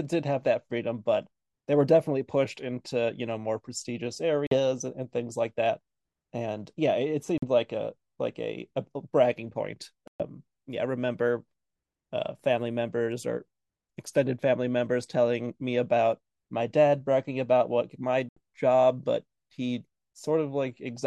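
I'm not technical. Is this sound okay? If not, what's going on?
No. The speech cuts to silence four times: 4.47 to 4.58 s, 7.38 to 7.44 s, 10.08 to 10.23 s, and 18.29 to 18.39 s. Each gap starts and stops sharply, then the speech resumes further along. This is a Bluetooth dropout, likely from sound arriving at the headphones too late.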